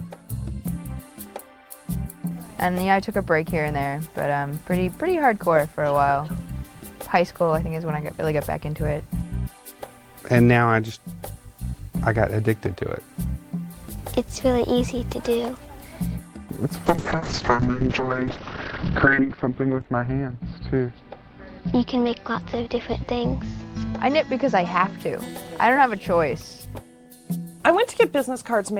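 From 16.87 to 25.03 s, a call bitrate drop makes the sound coarse and muffled. Treble above 4 kHz vanishes. It fits roughly 32 falling to 7 kbps.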